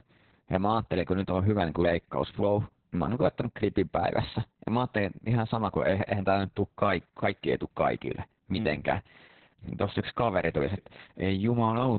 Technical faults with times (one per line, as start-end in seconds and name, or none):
0.00-11.98 Opus voice compression